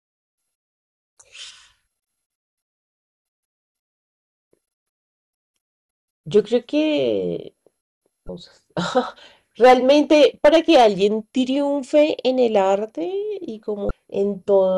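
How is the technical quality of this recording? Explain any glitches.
The recording has two kinds of fault: brief decoding glitches from damaged compressed data, and two stretches of hard clipping.

Damaged data in a compressed stream appears at 8.26–8.29 s and again at 13.87–13.91 s. Each time, corrupted bytes leave the decoder unable to read the frames, so it loses sync and hunts for the next valid frame header. The result is a short chirp or blip. On a spectrogram each shows as a narrow disturbance about 34 ms wide, and the waveform has a discontinuity.

Hard clipping runs from 9.64 to 10.87 s, driven about 8 dB past the limit, and briefly from 11.96 to 12.03 s at about 2 dB over. The peaks exceed what the signal path can represent, so they are cut flat, adding strong high harmonics. The longer section sounds like harsh fuzz on the speech, and the short one like a quick crackle. The waveform shows squared-off, flat-topped peaks, and the spectrogram shows energy spreading up into the high kHz range during those spans.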